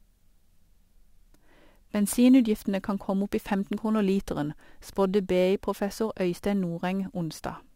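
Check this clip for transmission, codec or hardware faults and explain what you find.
One fault is present: crude rate conversion, running from 0.45 s to the end of the speech clip. The pattern is consistent with 44.1 kHz audio converted to 48 kHz by nearest-sample picking, which repeats samples on a fixed cycle instead of filtering and interpolating them. The resulting error sits roughly 30 dB below the signal and forms shifted, inharmonic copies of the speech, heard as a gritty, inharmonic fizz that rides on the louder and brighter parts of the speech.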